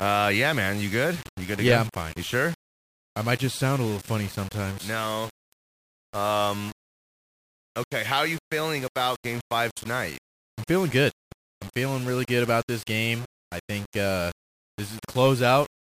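Speech runs through the whole clip with a grainy, rasping distortion that tracks the voice, harshest on quiet syllables and decays, which break into sputtering or drop to silence between louder sounds. The likely cause is low bit depth without dither, around 5 bits with plain rounding, leaving the error only roughly 20 dB below the signal. A waveform would show visible stair-stepping in soft passages, while a spectrogram would show broadband hash that appears and vanishes with the speech.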